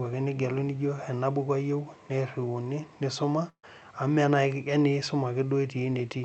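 At 3.49 s a burst of packet loss interrupts the speech until 3.65 s. Several consecutive packets failed to arrive in time, so the receiver's concealment extended the last decoded sound for about 136 ms, attenuating it as it went, with roughly 60 ms of that heard as silence. Playback then resumes with about 140 ms of speech skipped, a held, fading fragment followed by a jump, all limited by the call codec's band limit of about 8 kHz.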